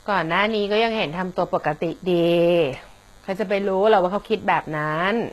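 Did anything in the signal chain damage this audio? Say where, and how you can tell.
Yes. A thin, steady buzz at 100 Hz with many harmonics runs under the speech throughout, about 35 dB down. This is DECT cordless phone buzz: 10 ms radio bursts rectified in the analogue wiring.

The s sounds are gritty and metallic throughout, and nothing remains above 12.3 kHz. This is likely HE-AAC compression at the codec stage, consistent with roughly 16 kbps, where replicated treble misaligns harmonics.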